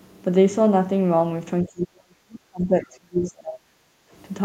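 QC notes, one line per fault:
1.64 to 3.96 s, speech suppressed in double talk: while both ends spoke, the echo canceller likely mistook the near talker for loudspeaker echo and attenuated it, so the speech sinks by up to roughly 35 dB across about two seconds.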